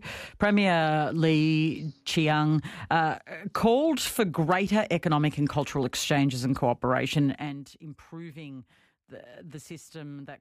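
A speech recording with zipper noise from 7.21 to 7.65 s. The level drops by roughly 20 dB in coarse unsmoothed steps, about a hundred per second, leaving an audible ticking buzz.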